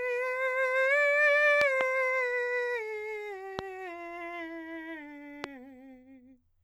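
Loud pops hit the music at 1.61–1.83 s (a double pop), 3.59–3.61 s and 5.44–5.46 s, peaking about 15 to 20 dB above it. They are likely voltage pulses from a switch or static. Each shows as a tall waveform spike and a vertical spectrogram streak.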